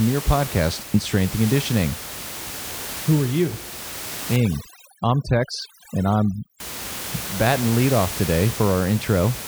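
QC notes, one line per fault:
4.36–6.60 s, overdone noise removal: over this 2.24 s stretch a noise reduction stage set too aggressively pulls individual frequency bands down or out whenever their level sits close to its noise estimate. The room noise, which elsewhere sits about 12 dB below the speech, drops away and breaks into twinkling, warbling fragments as bands switch on and off. Low-level parts of the speech fall under the same threshold and are removed along with it.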